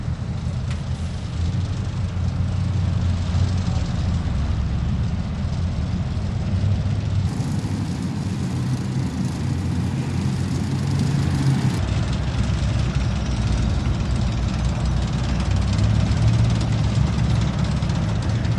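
Section at the wrong speed, from 7.27 s to 11.78 s: for about four and a half seconds the audio runs 1.32 times faster than the material around it, then drops back to normal. Because speed and pitch move together here, everything in that stretch sounds hurried and shifted up by roughly five semitones, with abrupt changes at both edges. The likely cause is that passage being played out or rendered against a mismatched clock.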